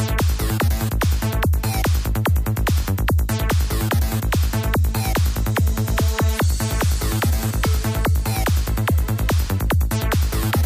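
Nothing is technically wrong with the audio.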